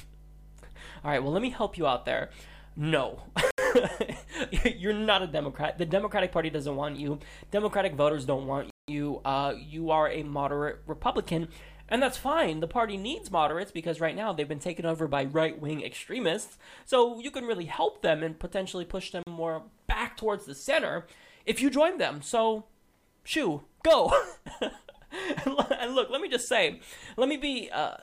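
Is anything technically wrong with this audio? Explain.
Yes, there are two problems: a mains hum and a set of dropouts that point to a Bluetooth stall.

From the start to about 13.5 s, a steady low 50 Hz drone with a few low harmonics sits under the sound, roughly 20 dB below it, and then stops. This is mains hum: a ground loop or a nearby transformer let the power line's alternating current leak into the signal path, so its frequency rides along as a constant tone.

At 3.51 s, 8.70 s and 19.23 s the audio drops abruptly to silence for 74 ms, 180 ms and 39 ms, then resumes. These are likely Bluetooth stalls: radio interference delayed packets, the headphones' buffer emptied, and playback halted until the resent data arrived.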